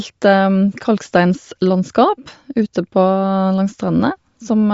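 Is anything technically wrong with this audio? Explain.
Yes. Throughout the speech, nothing reaches above about 7.7 kHz, and the upper band sounds breathy and grainy. This is likely Bluetooth LC3 compression. The codec discards detail in short transform frames and fills gaps with noise, which fits 10 ms frames at about 32 kbps.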